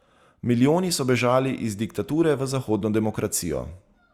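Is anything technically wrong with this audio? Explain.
No technical faults are audible.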